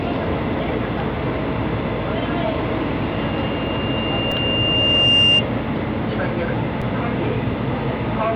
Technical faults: loudspeaker feedback squeal; repeated buffer

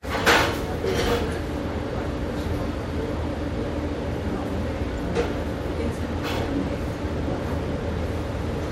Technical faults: damaged data in a compressed stream

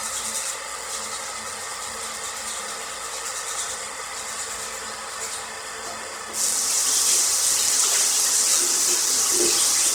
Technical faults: Opus compression

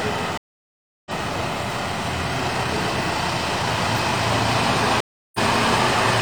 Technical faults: stream reconnect

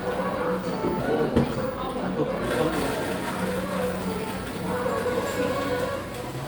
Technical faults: jitter buffer speed-up

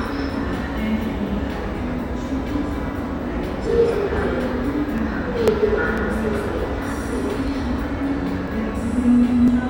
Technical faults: periodic USB or driver dropouts

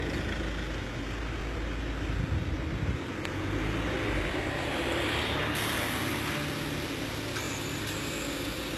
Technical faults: HE-AAC compression; overlapping chunks; pre-emphasis left on

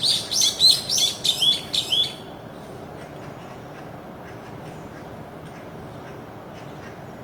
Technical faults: Opus compression

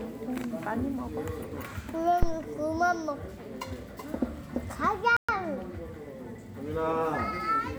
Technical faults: phantom power thump; playback stall

